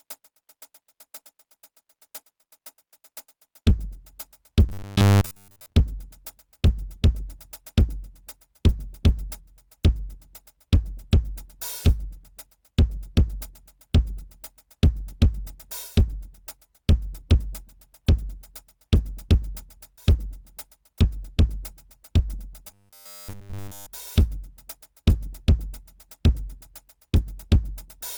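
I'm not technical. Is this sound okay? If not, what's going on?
No. Generation loss runs through the whole piece of music. It sounds swirly, hollow and smeared, and the starts of notes and beats lose their crispness. The likely cause is that the music was squeezed into a compressed format and unpacked again many times over, perhaps around seven. Each round throws away a little more detail and adds its own noise, and that damage piles up.

Robotic sound from repeated short buffers appears twice, from 4.69 to 5.73 seconds and again from 22.68 to 23.87 seconds. In both places the music turns into a stiff, metallic buzz at a steady 100 Hz. The likely cause is that new audio arrived too slowly, so the player kept replaying the last sliver of sound, about a hundredth of a second long, while the real music slipped past. About seven tenths of the first stretch was filled this way, and all of the second.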